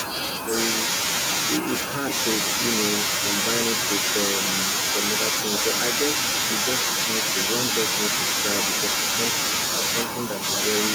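From the start to 0.53 s the speech sinks sharply, dropping by roughly 30 dB and losing about half a second of sound, as though gated. This is speech suppressed in double talk. The likely cause is an echo canceller treating the talker and far-end echo as one and muting both.

Between 1.66 and 2.12 s, and again from 10.04 to 10.44 s, a delayed copy of the speech trails in, about 15 dB and then about 10 dB below the main voice, each 1.13 s late. This echo leak is likely loudspeaker sound the far end's canceller failed to remove.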